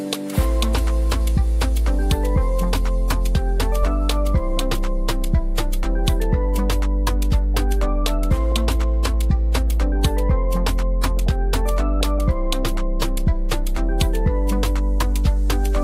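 DAB burbling at 4.12 s, 8.52 to 8.56 s and 11.28 s: bit errors, around one or two per thousand, slip past error correction into the MP2 data, corrupting samples so single sub-bands get brief blips of noise.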